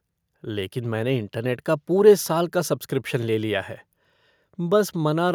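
Listening to the speech in this clip, nothing stood out as a technical problem.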